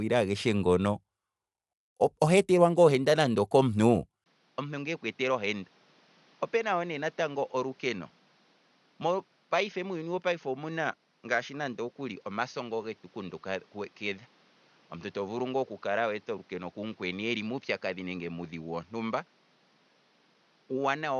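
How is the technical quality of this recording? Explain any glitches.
Technical quality is poor, with two faults that shape the whole recording.

Throughout, the speech has a grainy, breathy edge and nothing above 11.6 kHz, likely from Bluetooth LC3 compression, whose coarse coding fits roughly 48 kbps with 10 ms frames.

At 4.24 s there is a 20 ms silence. From then to the end, the sound is duller, with nothing above 6.6 kHz, is about 10 dB quieter, and carries new background noise roughly 35 dB down. This is likely the input being switched to a poorer device.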